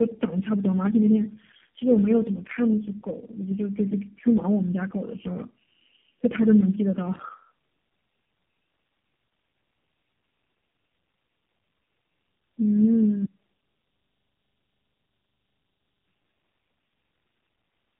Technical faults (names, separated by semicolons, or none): tandem speech coding; one channel inverted